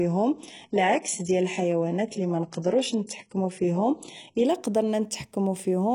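From 0.0 to 4.45 s the speech plays from an adaptive stream starting at a low bitrate. The player begins on a cheap, fast-loading version before it has measured the connection. Nothing sits above 11.1 kHz, and the top that remains sounds synthetic. Codec smearing is strong, which fits a very low-rate HE-AAC stream near 12 kbit/s. At 4.45 s the quality jumps up with no gap, consistent with a switch to AAC-LC near 96 kbit/s.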